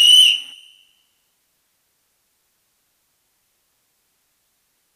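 No technical faults can be heard anywhere in this sound.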